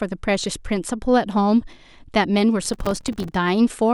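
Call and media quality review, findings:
Processor overload crackle, 2.65–3.34 s: gritty tearing over speech from dozens of missed buffer deadlines, each leaving a short silent gap. Fits buffers of around 3 ms on an overloaded audio thread.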